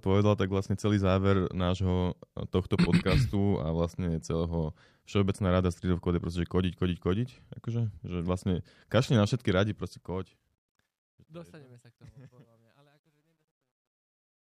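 At 9.46 s, after "že vlastne kašli na", the speech fades out toward the end at 14.41 s. The fade starts around 9.5 s and shows truncation distortion. The gain stage drops low bits without dither, which fits a 12-bit path. As the level falls, the waveform collapses into coarse steps. From 11.69 s to 14.41 s it sounds gritty.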